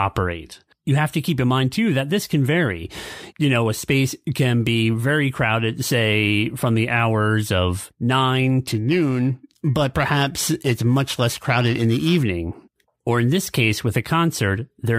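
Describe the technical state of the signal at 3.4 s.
At 3.4 s the speech signal is intact, with no audible dropout, distortion, glitch or other technical fault.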